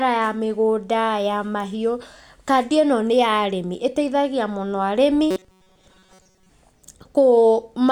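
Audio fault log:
5.31–6.49 s: robotic sound from repeated short buffers after "arĩmi ĩteithagia mũno arĩmi"; rigid 188 Hz buzz, likely a roughly 5 ms chunk looped while most audio is skipped.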